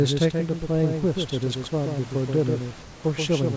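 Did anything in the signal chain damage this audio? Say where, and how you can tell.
Yes. A doubled audio track runs through the whole clip. A second, full-band copy of the speech trails the original by roughly 150 ms at roughly 5 dB lower, heard as a flat, slap-like repeat with no decay or room colouring. That clean, fixed offset most likely comes from the call-processing stage, where the signal is picked up twice, once through a slower capture or routing path, and both copies are mixed into the output.

Comfort noise replaces the background from 2.82 to 3.04 s, about 220 ms. In that gap the room noise loses its texture and becomes a smooth, featureless hiss about 1 dB quieter, then the real background returns with the sound. This is likely discontinuous transmission on the network or call side: the sender's voice detector stopped sending audio, and the receiver synthesised shaped noise, as in RFC 3389 comfort noise, to fill the pause.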